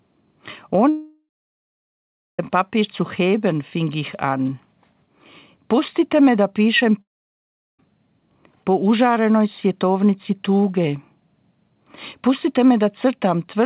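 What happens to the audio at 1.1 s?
At 1.1 s the sound is inside a gap from 0.89 to 2.39 s, likely a long network dropout: a brief fading buzz, then about 1.15 s of flat, empty waveform and blank spectrogram.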